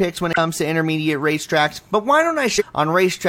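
Speech with damaged data in a compressed stream at 0.33–0.38 s and 2.56–2.62 s. Corrupted frames make the decoder lose sync, giving brief disruptions.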